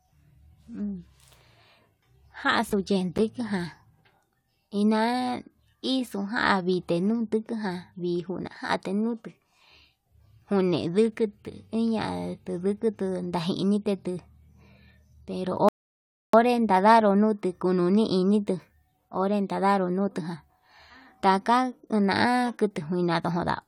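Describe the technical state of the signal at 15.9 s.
At 15.9 s the speech has stopped dead because of a rebuffering stall that runs from about 15.69 to 16.33 s. The player used up the audio it had downloaded and had to wait for more before it could carry on. What you hear is a clean cut to silence for roughly 0.65 s, and then the speech picks up at exactly the point where it broke off. Nothing is skipped, but the pause adds that much time to the clip.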